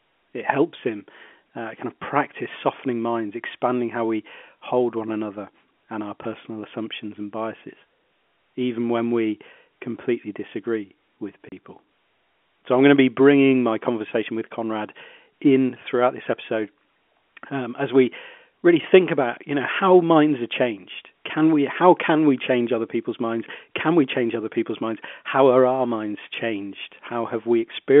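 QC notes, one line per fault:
11.49–11.52 s, packet loss filled with silence: just after "we completely disagree with", a 30 ms gap with hard edges, which fits one dropped packet replaced by silence.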